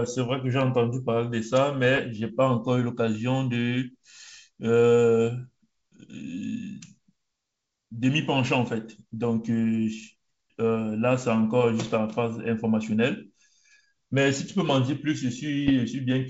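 Speech on a G.722 wideband link shows bit errors on an ADPCM link at 1.85–2.01 s, 11.85–11.98 s and 15.67–15.71 s: pops and rough bursts with brief level jumps. Corrupted step size and predictor keep the distortion ringing for milliseconds after each flipped bit.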